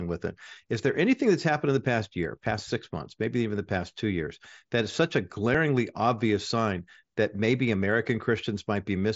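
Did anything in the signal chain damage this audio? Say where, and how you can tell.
No, nothing in the signal chain damaged this speech.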